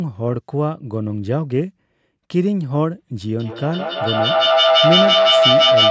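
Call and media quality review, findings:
Feedback howl, 3.4 s to end of clip at 5.9 s: tone around 700 Hz climbing to about 6 dB over the speech, repeating roughly every 150 ms. Two devices sharing a room on the call, mic-to-speaker loop gaining each pass and locking onto that frequency. Never breaks, so nobody muted. Call mic processing looks fine, with the usual cap around 8 kHz.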